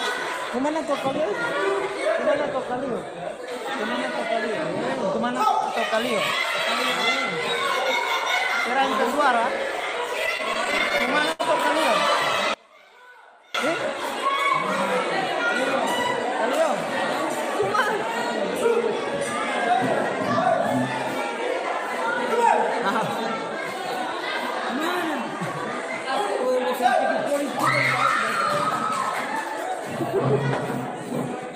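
Repeated stalls (stutter) run from 10.19 to 11.41 s. Packets arrived late, so the jitter buffer kept emptying, and the receiver stretched the last sound to cover each wait. About a dozen hitches, the longest 75 ms, fill roughly a sixth of that stretch. Nothing is lost, but the audio drags and stutters.

From 12.54 to 13.55 s the level suddenly drops by about 28 dB, leaving only a faint residue before it returns. The likely cause is one channel inverted: with one stereo side's polarity reversed, the shared content cancels in the mono sum.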